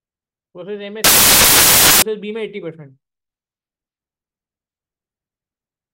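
Samples built from the wrong bytes break in from 1.04 to 2.02 s: the reader assembles each sample's bytes wrongly, shifted by a byte or in swapped order, so the rapidly changing low bits dominate and the audio turns into loud, harsh broadband noise.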